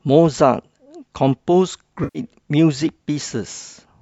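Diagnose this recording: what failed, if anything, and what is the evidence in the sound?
The failure is AAC frame loss with concealment at the network-to-decoder stage. From 2.04 to 2.19 s the speech smears into a noisy, phasey patch, with about 110 ms of signal missing. That span fits roughly eleven consecutive 10 ms low-delay frames, as the short-frame AAC-ELD coding likely in use would produce. A single-frame dropout at 3.62 s leaves a brief smeared blip. In both places the decoder rebuilt the missing frames from the last good spectrum, producing texture without true content.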